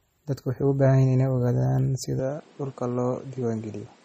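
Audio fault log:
Throughout: MP3 compression. The codec damage is plainly audible: speech has that watery, swirly quality as weak frequency components flicker in and out between frames, and attacks smear. Nothing comes through above 15.2 kHz, the fixed treble cut an encoder applies when bits are tight. The overall character fits a low bitrate around 32 kbps, so this is likely MP3 encoding at a starved rate rather than some other processing.
2.20–4.05 s: input switched to a poorer device. From 2.20 s to the end, the band narrows abruptly, with nothing left above 10.8 kHz, so the sound turns duller. The level drops by about 5 dB and a new noise floor appears, sitting about 30 dB below the speech. There's no gap at the changeover. A narrower band, a different level and different noise all changing together likely mean the input moved to another microphone or a headset's call profile.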